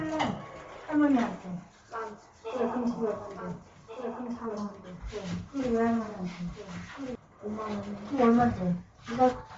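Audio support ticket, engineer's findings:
Bluetooth LC3 compression, whole clip: likely LE Audio link coding at a low rate. Nothing above 7.7 kHz, with noise-filled, grainy, breathy upper band, plainly audible. Damage fits roughly 32 kbps with 10 ms frames.

Doubled audio track, 2.85 to 7.15 s: likely a second, slower capture path mixed in. Full-band copy trails by about one and a half seconds, about 5 dB quieter, dry, with no room colour. Starts and stops abruptly.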